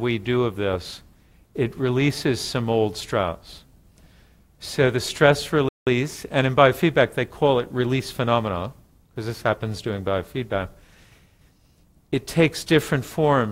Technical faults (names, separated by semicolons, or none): playback stall